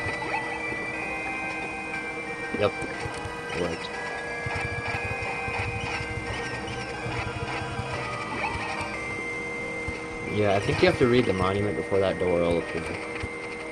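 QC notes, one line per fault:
No faults found in this clip. Nothing in the audio calls for a QC entry.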